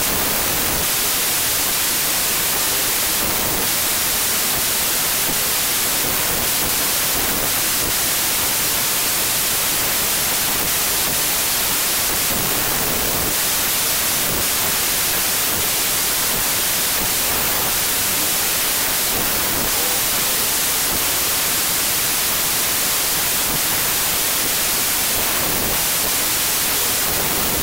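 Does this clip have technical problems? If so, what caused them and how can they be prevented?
Yes. Wrong sample width runs throughout: packed 24-bit samples are being read as 16-bit, so many values are built from mismatched bytes, giving loud noise with the original buried inside, playing at about 0.67 times speed and correspondingly lower pitch. Prevent it by declaring and checking the sample format in the file header or stream metadata before decoding.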